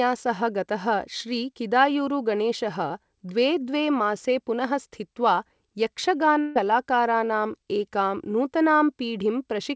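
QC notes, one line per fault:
6.41 to 6.58 s, burst of packet loss: a run of packets, or one long one, failed to arrive in time, so the receiver concealed the hole for about 145 ms by extending the last sound and fading it out, heard as a held buzz or sinking hiss with no real audio underneath. When playback picks up again, about 150 ms of the original speech is gone. The wideband coding around it, with nothing above 8 kHz, fits G.722.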